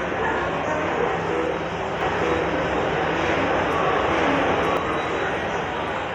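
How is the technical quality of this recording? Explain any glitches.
The recording has one clear glitch. A doubled audio track runs from 2.01 s to 4.77 s. The same sound is heard twice, with a full-band copy trailing about a second behind at roughly the same level as the original. It most likely comes from a second capture path or an edit holding two copies out of step. The copy has no decay or room colour, so it reads as a flat repeat, and it cuts in and out abruptly at both ends.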